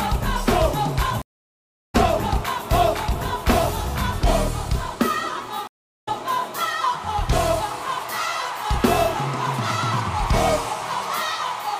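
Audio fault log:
1.22–1.95 s and 5.67–6.09 s, stream reconnect: the connection dropped, giving 0.69 s and 0.34 s silences; a fresh decoder restarts the audio about 0.7 s and 0.4 s further on.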